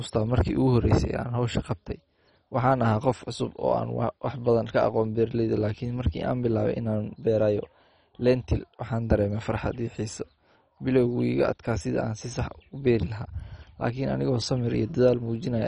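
Likely MP2 compression, fitting a rate near 32 kbps, starves upper sub-bands of bits throughout: nothing remains above 10.3 kHz, leaving the speech dull, gurgling and granular.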